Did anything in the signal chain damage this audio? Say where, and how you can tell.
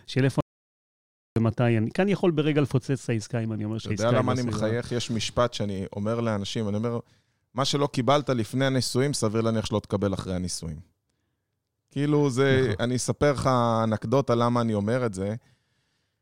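Yes. An audio dropout to silence runs from 0.41 s to 1.36 s, so just under a second of the speech is lost. The speech cuts off abruptly and the gap is silent, with no room tone or noise floor beneath it, before the speech resumes mid-flow. That points to the capture stage: the input was likely lost, through a disconnected device, a failed link or a mute, while the recorder kept writing silence.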